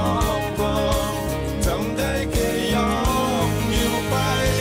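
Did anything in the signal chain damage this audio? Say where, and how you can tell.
No, nothing in the chain has left a mark on this audio. No stage, from the wiring and converter through to storage and playback, shows any evidence of damage.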